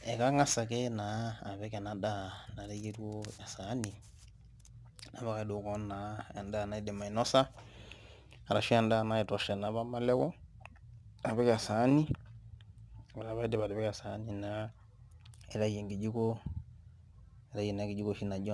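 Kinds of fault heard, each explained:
Aliasing: the speech was resampled to a lower rate without first filtering out high frequencies, so content above about 12 kHz (which fits a 24 kHz rate) folds back as false, unrelated tones roughly 25 dB below the voice, leaving sibilants gritty and metallic throughout.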